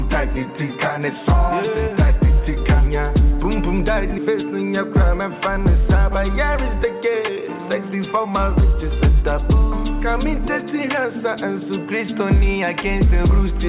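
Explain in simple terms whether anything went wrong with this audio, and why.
A jitter buffer speed-up occurs from 6.55 to 8.62 s. During those two seconds the audio plays about 7% fast without any change in pitch, so it sounds slightly hurried. The receiving end had built up more audio than it wanted, typical after delayed data arrives in a burst. To catch up, it snipped out many tiny slices of sound, roughly 150 ms in total. The phone-style call codec underneath leaves nothing above 4 kHz.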